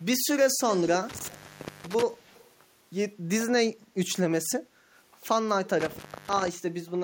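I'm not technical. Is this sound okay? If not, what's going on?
No. In four short spots, at 0.72 to 0.9 s, 1.31 to 1.39 s, 2.24 to 2.48 s and 5.65 to 5.69 s, a faint second copy of the speech trails about 0.2 s behind. This is echo leak, likely from a speakerphone whose echo canceller let some of its own output slip back.

Twice, between 1.09 and 2.03 s and between 5.80 and 6.48 s, the sound drops out with a crackle at each edge. The gaps last about half a second and about 0.3 s. This is an intermittent contact: a loose cable or plug briefly breaking the connection.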